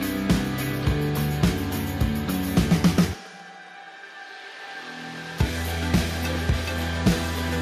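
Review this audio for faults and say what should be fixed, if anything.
No faults turned up in this audio, so nothing needs to be fixed.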